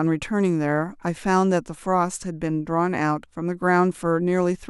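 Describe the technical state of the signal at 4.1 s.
At 4.1 s the speech plays through with no audible fault; the signal is intact at that moment.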